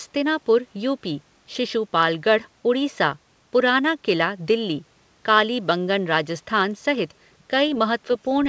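No technical faults can be heard in the speech, which carries the band limit of a wideband call path with nothing above 8 kHz, as fits the G.722 codec.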